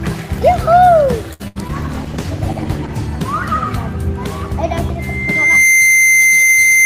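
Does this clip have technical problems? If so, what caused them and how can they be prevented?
Yes. From 1.33 to 1.42 s there is a short stall from a late packet: the jitter buffer ran dry and the last sound was stretched for 63 ms, then playback resumed at the same point. Unlike a loss, nothing is skipped; the sound is only held too long. A deeper jitter buffer would absorb this delay.

From 1.48 to 1.58 s a burst of packet loss cuts about 80 ms. The receiver prolonged the last sound and let it fade, then jumped ahead. Unlike the stall, the audio resumes further on with material missing. Forward error correction or redundancy on a more stable link would recover it.

At 1.68 to 1.71 s a short concealed packet loss removes about 20 ms. The gap was patched by extending the preceding sound and blending back, so it registers as a brief smear rather than an audible fade and jump. The same error-correction measures would prevent it.

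From 1.75 to 3.15 s a call bitrate drop takes the encoder from 32 to 14 kbps, staying at the lowest rate for about 1.3 s. The audio turns coarse and dull, with high frequencies trimmed, rather than breaking up in time. More reliable bandwidth, or a higher minimum bitrate, avoids this.

From 4.99 s to the end a loudspeaker feedback squeal builds at 2.1 kHz over well under a second and ends up around 5 dB above the signal. Unlike codec artefacts, it is a single steady, growing tone. Headphones, echo cancellation or separating the microphone from the loudspeaker stops the loop.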